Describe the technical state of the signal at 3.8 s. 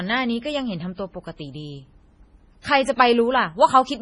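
Likely MP3 compression at 3.8 s, as throughout. The treble stops at 10.5 kHz and weak frequency lines drop out, so the speech swirls, which fits a 24 kbps encode.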